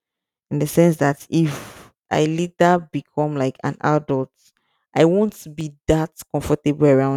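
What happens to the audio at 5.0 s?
At 5.0 s the speech sits inside a run of periodic USB or driver dropouts, from 0.49 to 6.64 s. Every 1.02 s a tiny slice is skipped. Each skip ticks while speech is sounding.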